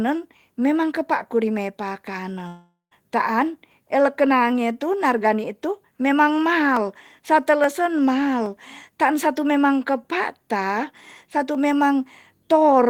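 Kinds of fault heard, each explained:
Long network dropout: from 2.47 to 2.94 s the speech breaks off, a fading fill runs for about 0.44 s, then silence, likely a stream interruption losing about 0.44 s.
Dropped samples: sharp single clicks at 6.77, 7.64, 8.46 and 11.55 s, each a tiny waveform jump, likely from a fraction of a millisecond of missing samples.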